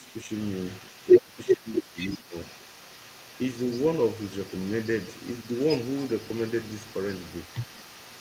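A speech recording where the echo canceller most likely failed to separate the talker from loudspeaker echo during double talk, so the speech is suppressed in double talk: it dips slightly at 0–0.29 s, drops sharply by about 20 dB at 1.18–1.38, 1.56–1.99 and 2.2–2.36 s, and dips briefly at 7.65–7.69 s. The canceller also likely left residual echo, so the other side's voice leaks through faintly throughout, around 20 dB below the speech.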